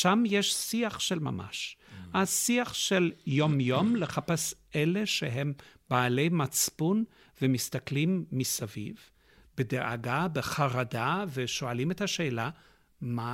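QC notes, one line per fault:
3.27 to 4.12 s, Bluetooth SBC bit pool drop: for just under a second the speech goes dull and picks up a gritty, grainy edge, then snaps back. That's the link getting squeezed. The encoder has fewer bits per frame, so the upper sub-bands get starved or dropped and the rest are quantised coarsely. The depth of the dulling fits the bit pool falling from 31 to about 13, roughly 94 kbps.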